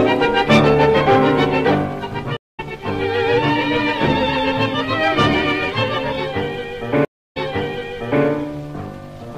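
At 2.37 s a stream reconnect drops the audio into 215 ms of silence. The player lost its connection and restarted decoding mid-stream, so the sound picks up roughly a fifth of a second further on, skipping material. At 7.05 s a second reconnect leaves 305 ms of silence, but this time the audio resumes 888 ms earlier and replays that stretch. Both gaps appear as flat waveform and blank vertical bands on a spectrogram, with an abrupt edge where the sound cuts out and a fade-in where it returns.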